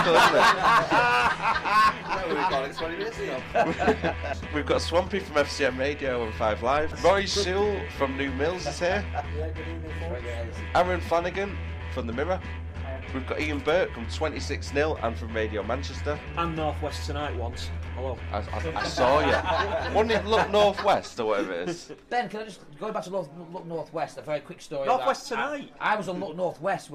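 Nothing stood out on listening to this audio.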